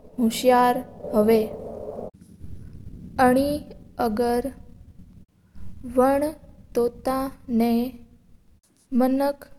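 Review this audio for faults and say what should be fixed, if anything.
Nothing stood out on listening to this speech, so there is nothing here that needs fixing.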